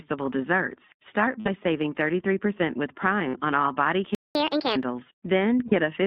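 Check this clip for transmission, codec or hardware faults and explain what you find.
The speech carries narrowband codec damage throughout, three short dropouts, one silence, and a fast, high-pitched stretch.

Throughout: the sound is narrow, slightly rough and synthetic, confined to roughly 150 Hz to 3.7 kHz. This is the iLBC codec, coding each 20 ms frame independently on a narrowband line.

At 1.40 to 1.48 s, 3.28 to 3.36 s (just before "on all body") and 5.68 to 5.74 s: brief held, buzzy vowel-like smears of about 60, 60 and 40 ms. These are lost iLBC frames, where the decoder repeated the last pitch cycle with noise until clean frames resumed.

At 4.15 to 4.35 s, after "on all body": the sound cuts to silence for about 200 ms, then resumes. This is a playback stall, likely caused by the player running out of data or being blocked.

At 4.35 to 4.76 s: the voice runs 1.5 times fast and about seven semitones high, then settles. 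This is catch-up at higher speed, where the player resampled its backlog to regain the time lost in the stall.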